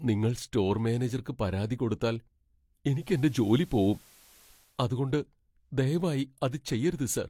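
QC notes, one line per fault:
2.87–4.82 s digital radio blending to analogue: faint hiss, about 3 dB level shift as the receiver cross-fades to FM.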